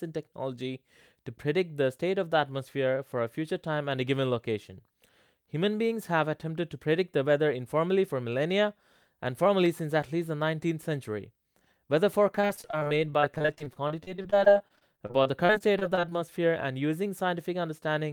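From 12.35 to 16.13 s the speech turns choppy, with brief pieces missing throughout. This is repeated packet loss: dozens of short dropouts, none longer than about 35 ms, each patched by stretching the preceding sound, covering roughly a fifth of that stretch.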